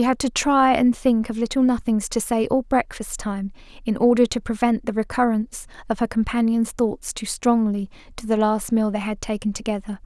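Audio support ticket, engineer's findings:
No audible faults found in the speech recording; no component implicated and nothing to escalate.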